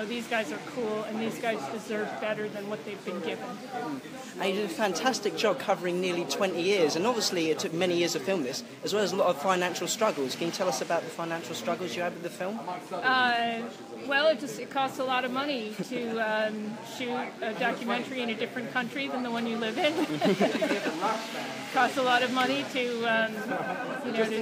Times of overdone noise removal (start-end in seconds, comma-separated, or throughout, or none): none